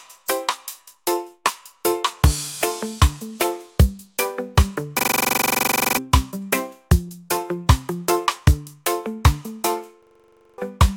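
At 4.99 to 5.97 s and 10.03 to 10.58 s, a system hang loop repeats one 42.67 ms slice at 23.4 Hz. It makes a buzzing stutter, which fits a 2048-sample buffer. About one second, then half a second, is lost.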